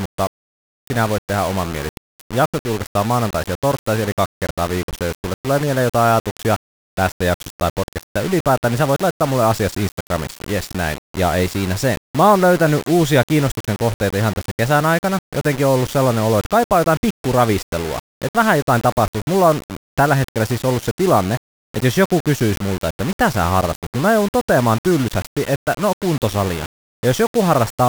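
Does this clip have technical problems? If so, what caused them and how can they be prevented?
Yes, the speech is grainy and gritty throughout, with the error sitting only around 15 dB below the signal. That's likely low bit depth without dither, consistent with rounding to about 5 bits, so the error tracks the signal instead of forming a steady noise floor. To prevent it, keep at least 16 bits and add dither before any reduction.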